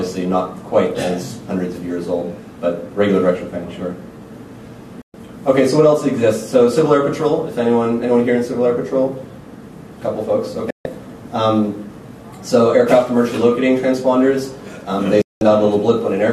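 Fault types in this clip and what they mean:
digital broadcast dropout: the receiver lost the digital signal or rejected corrupted frames and muted until clean ones arrived. The sound fades out within about 3 ms into silent holes of roughly 120, 144 and 192 ms, at 5.02, 10.70 and 15.22 s, and the programme sent during each hole is gone.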